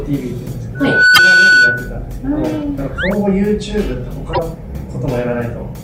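Loudspeaker feedback squeal runs from 0.75 to 1.94 s. The microphone is picking up a loudspeaker it drives, and at 1.5 kHz the loop returns more signal than it sends, so that frequency feeds on itself. The tone swells over roughly a third of a second into a steady squeal sitting around 10 dB above the rest of the sound, then ends at 1.94 s.

Damaged data in a compressed stream appears from 1.14 to 1.19 s, inside the squeal, and again from 4.30 to 4.39 s. Corrupted bytes in the encoded stream leave the decoder unable to read those frames, so it loses sync and hunts for the next valid frame header. Each spot comes through as a short glitch.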